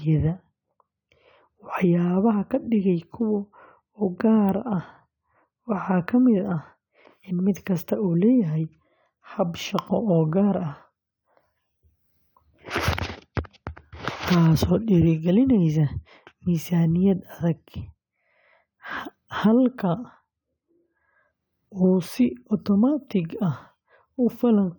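No technical faults can be heard anywhere in the recording.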